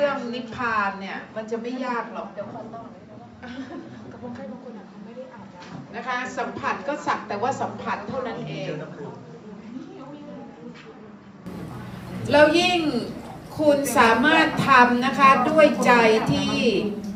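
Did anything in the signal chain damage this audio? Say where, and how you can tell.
Yes. From the start to 11.46 s the sound is dull and quieter, with nothing above 7.6 kHz and a faint new noise floor. It then opens up cleanly with no gap. That points to the capture stage, most likely an input switched to a poorer device, then back.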